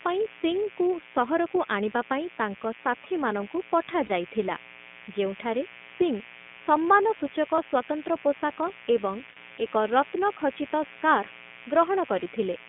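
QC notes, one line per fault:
Throughout: mains buzz. A steady, raspy buzz sits roughly 20 dB under the speech. It is built on 60 Hz with sharp harmonics climbing into the kilohertz range, the signature of switching spikes from a dimmer, rectifier or poorly shielded cable, arriving twice per mains cycle.
Throughout: iLBC codec. The speech is confined to a telephone band of 200 Hz to 3.5 kHz and has a plainly rough, slightly synthetic edge. Each short frame's excitation is coded independently, consistent with 20 ms frames at the higher iLBC rate.
4.06–4.11 s, 7.56–7.59 s, 9.30–9.38 s and 12.24–12.27 s: lost iLBC frames. Each gap of 20 to 60 ms, the first right after "ଆଣିବା ପାଇଁ ତାଙ୍କ ସାଥୀମାନଙ୍କୁ", becomes a brief held, buzzy vowel as the decoder repeats the last pitch cycle with noise. Clarity returns immediately afterwards because frames stand alone.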